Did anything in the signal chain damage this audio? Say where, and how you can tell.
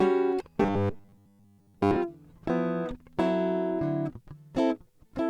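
Yes. From 0.62 s to 1.96 s the music turns into a rigid, metallic buzz pitched at 100 Hz. The original material still shows through only in rough outline, with most of that stretch replaced by repetition. This is robotic sound from repeated short buffers, likely at the driver or buffer stage: audio arrived too seldom, so the software kept replaying a roughly 10 ms slice while the real audio was skipped, and that repeat rate imposes the fixed 100 Hz tone.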